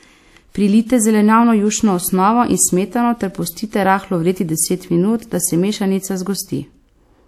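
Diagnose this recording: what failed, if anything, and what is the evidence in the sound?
The failure is at the codec stage. Across the whole speech clip, nothing is present above 16.3 kHz. The sound points to low-bitrate audio saved at a high bitrate, likely a 64 kbit/s encode later re-saved as 192 kbit/s MP3. The larger file cannot restore what the first encode removed.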